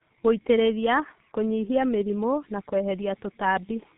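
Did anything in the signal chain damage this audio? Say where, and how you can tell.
Yes. The damage happens at the codec stage and runs through the whole speech clip: it has passed through the G.723.1 codec. It sounds muffled and hoarse, with smeared consonants, which fits a narrowband coder running near 6 kbit/s. On a spectrogram nothing appears above 4 kHz, and the formant bands step coarsely in 30 ms blocks instead of gliding. The codec rebuilds the voice from a sparse model that it updates only once per frame, so fast articulation gets blurred.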